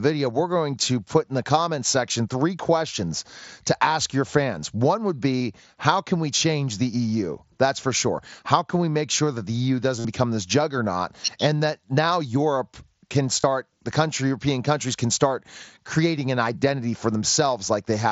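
Voice packets from the headset were dropped at 5.39 s, 9.99 to 10.05 s and 13.41 to 13.44 s, and each gap was filled by repeating recent waveform. This is concealed Bluetooth headset packet loss. The 52.5 ms run at 10 s sounds like a held buzzy tone that warbles on recovery.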